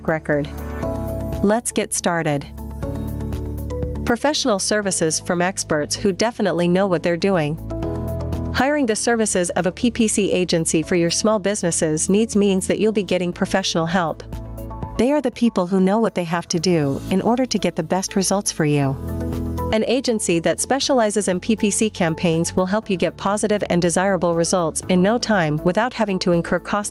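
The whole clip has gain pumping: the gain is pulled down by something like 15 dB each time a loud sound hits, so everything feels squashed and flat. Most likely the input gain is set far too high and a fast limiter keeps clamping it.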